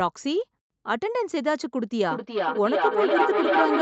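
From 2.09 s to the end, the speech gets caught in a feedback echo between two devices. Another device in the same room seems to be on the call, playing this microphone's audio back into it, and neither echo canceller touches the other's playback. Each phrase comes back roughly every 0.4 s, thinner and ringier. The loop is hot enough that repeats stack up instead of fading, peaking about 2 dB above the speech itself, all within the call's usual band topping out at 8 kHz.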